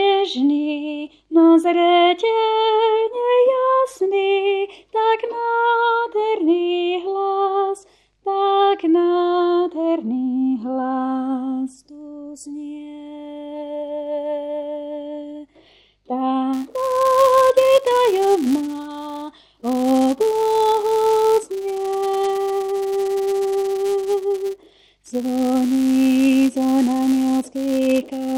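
From 16.54 s to the end, the audio carries a steady 200 Hz buzz that rises and falls with the signal's level: a filter restarted on every block. It loses its state at each block boundary, so every block opens with a small transient, repeating 200 times per second.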